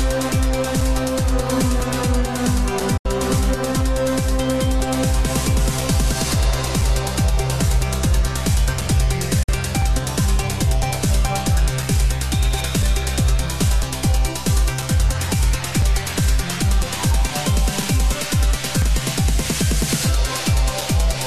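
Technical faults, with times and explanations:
0.81 to 20.81 s: periodic USB or driver dropouts. About twenty short gaps of around 4 ms, one every 1.0 s, are filled with silence, heard as steady ticks.
2.97 s and 9.43 s: digital broadcast dropout. The sound fades out over 8 ms and mutes for 72 ms, then 48 ms, which fits a few lost frames.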